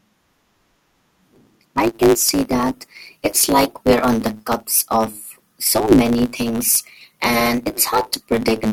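Speech, with a block size mismatch (truncated) throughout. Each block's tail is discarded, causing a steady 109 Hz buzz and delivery 1.09 times faster.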